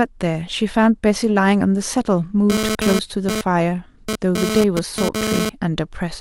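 From 2.50 s to 5.49 s there's GSM phone buzz, a hard, raspy 217 Hz rattle sitting only about 2 dB under the speech. A nearby 2G phone's radio bursts are being rectified in the audio circuit, and since it's moving data, the buzz comes and goes.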